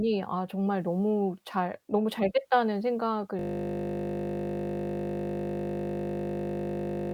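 At 3.39 s the speech gives way to a system hang loop that runs to the end. The driver stalled while the hardware kept replaying one 20 ms buffer, so the sound becomes a steady 50 Hz buzz repeating that fragment continuously.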